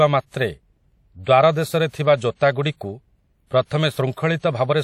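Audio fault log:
Throughout: WMA compression. The speech rings and smears, with hiss pumping alongside it and nothing above 16.7 kHz, likely a WMA encode fitting about 48 kbps.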